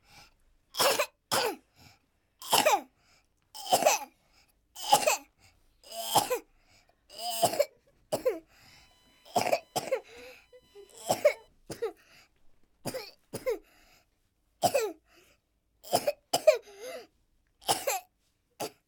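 A recording of everyday sounds carries USB whine from 8.67 to 11.48 s: a steady pitched tone built on 1 kHz, strongest at its 3 kHz harmonic, sitting roughly 40 dB below the sound. On a spectrogram it shows as thin horizontal lines at 1 kHz and 3 kHz. It comes from the bus drawing current in 1 ms frames, which leaks into the audio through power or ground.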